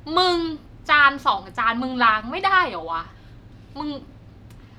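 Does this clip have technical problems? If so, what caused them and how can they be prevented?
No, the speech signal shows no technical faults, so there is nothing here that needs a cause or a prevention step.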